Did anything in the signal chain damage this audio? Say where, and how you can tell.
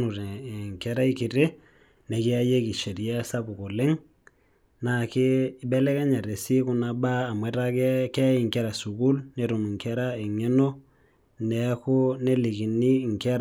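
No, nothing in the signal chain damaged this audio.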